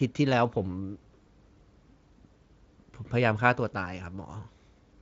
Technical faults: none

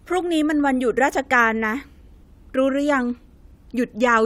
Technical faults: none

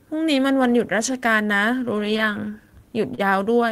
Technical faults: short stall from a late packet

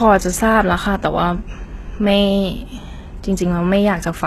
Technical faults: HE-AAC compression

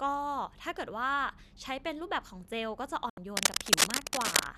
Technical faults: digital broadcast dropout; cable scratch noise

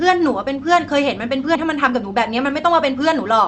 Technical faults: skip ahead; jitter buffer speed-up

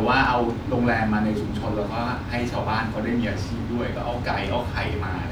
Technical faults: none

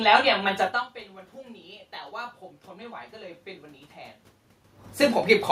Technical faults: automatic gain rising

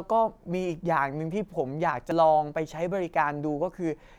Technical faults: damaged data in a compressed stream

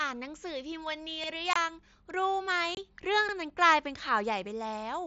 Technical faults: overlapping chunks; unconcealed Bluetooth headset packet loss

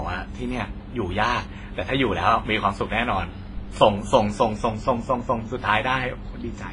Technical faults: transcoding between lossy codecs

